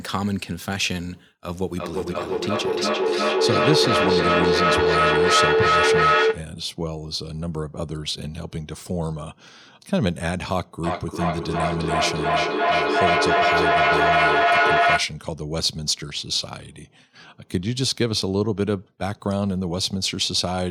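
A speech recording with two acoustic loop faults. From 1.76 to 6.56 s there is feedback echo between two devices. Each phrase returns roughly every 400 ms, thinner and ringing, peaking about 6 dB above the speech. From 10.84 to 15.22 s a feedback howl builds near 700 Hz, with a loop delay of roughly 400 ms, and reaches about 6 dB over the speech. The cause is another device's loudspeaker feeding this microphone, which the echo canceller cannot remove because it only removes what its own device plays.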